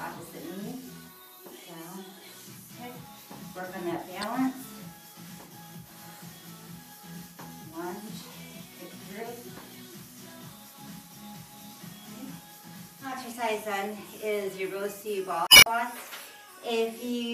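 Damaged data in a compressed stream twice corrupts frames the decoder cannot read correctly, so it loses sync and hunts for the next valid header. The result is a brief glitch from 4.22 to 4.24 s, and a longer glitch from 15.45 to 15.67 s.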